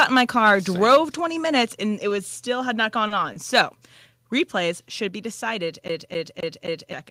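From 0 to 0.55 s and from 0.84 to 0.97 s, the loudest peaks sound flattened and distorted. This is likely microphone overload, about 4 and 5 dB past the converter's limit.

At 0.95 s, near the end of that second overload, the level drops about 2 dB in one step. It drops again by about 2 dB at 4.07 s. This is likely a microphone volume step-down, with the input gain cut in a single move.

Between 3.08 and 3.24 s, a sound is held for about 30 ms. A second short stall follows at 3.33 to 3.37 s, held about 20 ms. Each is a short stall from a late packet: the last sound was stretched until the data arrived, and nothing is missing.

From 5.88 to 6.93 s, the same 262 ms stretch plays four times over, with a brief mute at each jump. This is the even stutter of a CD stuck on one turn.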